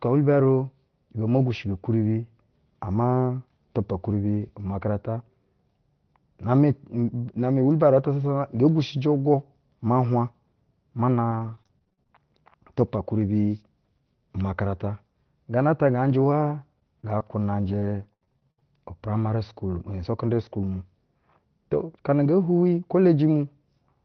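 From 11.31 to 12.11 s, and again from 16.79 to 18.63 s, repeated packet loss punches a string of short holes in the stream, up to 40 ms and then 76 ms long. Each hole is bridged by stretching the preceding sound, so the speech turns choppy and robotic.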